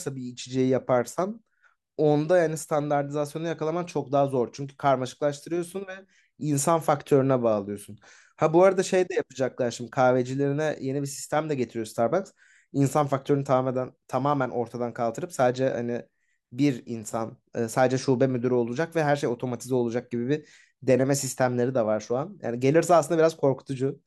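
The speech recording has no audible technical faults anywhere in the signal.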